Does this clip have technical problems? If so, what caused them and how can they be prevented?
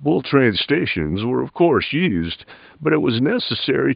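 No, there are no technical problems in this speech clip, so nothing needs preventing. A faint room noise sits about 45 dB below the speech; it belongs to the recording space rather than to any fault.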